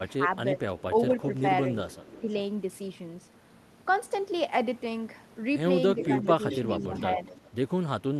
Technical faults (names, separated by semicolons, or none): speech suppressed in double talk; echo leak